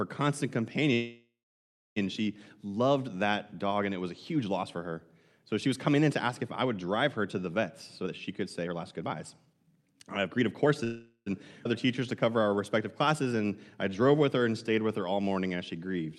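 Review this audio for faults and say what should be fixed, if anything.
Call audio freeze at 0.93–1.98 s, just before "she loved that dog", and at 10.84–11.28 s: the last sound is stretched into a fading buzz, reaching silence for about 0.64 s and 0.07 s, likely because delayed packets emptied the jitter buffer. Unlike a skip, nothing is lost.

Jitter buffer speed-up from 8.02 to 10.67 s, after "her to the vets": pitch periods are trimmed repeatedly, running speech at 125% and cutting roughly 0.7 s. Pitch stays unchanged, unlike a resampling error.

Skip ahead at 11.64 s: around 0.4 s of speech vanishes and the two sides are joined almost directly, with a gap of only about 7 ms, which sets it apart from a freeze.

Jitter buffer slow-down at 11.86–12.57 s (91% speed), 13.09–13.48 s (89%) and 13.90–16.12 s (89%): repeated pitch periods draw sounds out at the same pitch instead of inserting a pause.

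Stabilising network delay and giving the jitter buffer a steadier, adequately sized target would prevent these freezes, skips and speed changes.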